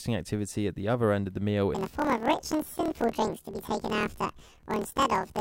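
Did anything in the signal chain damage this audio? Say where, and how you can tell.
Yes. From 1.75 s to the end at 5.40 s, the speech jumps an octave high with a rapid flutter at about 38.3 Hz. This is planar audio read as interleaved, a sample-format conversion fault. Each 26.12 ms block plays left then right at double speed.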